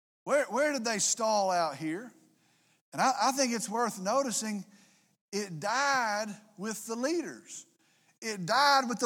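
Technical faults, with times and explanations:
Nothing stood out as a technical fault on listening to this speech recording.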